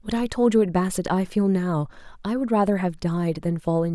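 The speech signal in this recording shows no audible technical fault at any point.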